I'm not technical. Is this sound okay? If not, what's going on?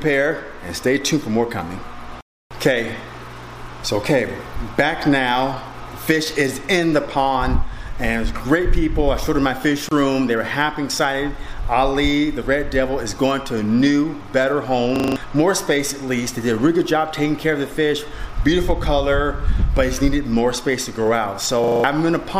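No, there are a couple of glitches worth knowing about.

Around 9.89 to 9.91 s there's a gap at a join of encoded pieces. The audio was compressed in separate chunks and stuck together without trimming the little bits of silence the compressor adds at each chunk's start and end. You get a sudden dropout of about 27 milliseconds, a tiny hole with slightly blurred edges, and then the sound picks up exactly where it left off.

At 14.96 to 15.16 s and again at 21.64 to 21.84 s there's a system hang loop. The computer briefly froze while the sound hardware kept replaying whatever was already in its buffer. A 40-millisecond slice repeats five times, 25 times a second, so it comes across as a quick rattling stutter. Each one replaces roughly a fifth of a second of the real audio.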